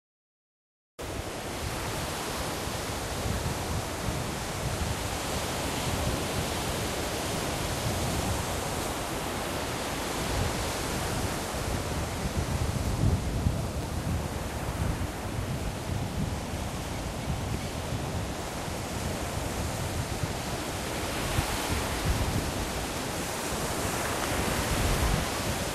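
Everyday sounds, with a cut-off start: the first 0.99 s is digital silence, then the audio enters abruptly in the middle of a sound with no attack or fade-in. The capture or stream evidently began late, truncating whatever was already sounding.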